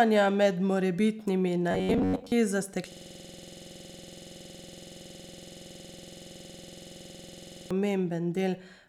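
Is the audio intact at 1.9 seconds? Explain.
No. From 1.71 to 2.32 s, just after "med morebitnimi", the speech collapses into robotic sound from repeated short buffers: a rigid, metallic buzz near 94 Hz that only loosely tracks the speech. The likely cause is new audio arriving too seldom, so the playback loops the last fragment of roughly 10.7 ms for most of the span while real audio is skipped. A spectrogram shows evenly spaced harmonic stripes locked to 94 Hz, and the waveform shows one short cycle repeating identically.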